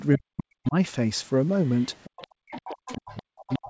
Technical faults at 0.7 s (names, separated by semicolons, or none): speech suppressed in double talk; other side's voice leaking through